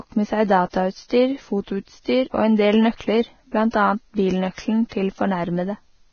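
Speech runs throughout with heavy, grainy, hissy treble and nothing above 6.5 kHz, likely from Vorbis compression. The damage fits a bitrate near 17.5 kbps. On a spectrogram there is a hard horizontal ceiling at 6.5 kHz, with speckled, noisy texture replacing fine detail below it. Pre-echo appears three times: at 2.97 to 3.00 s (31 ms) just after "en del", at 3.71 to 3.74 s (27 ms), and at 4.89 to 4.92 s (26 ms). In each case a brief hiss leads a sharp attack, because quantisation noise sized for the loud onset spreads back across its transform block. On a spectrogram this shows as a faint broadband smear just before the onset. On a waveform it shows as low noise ahead of the transient.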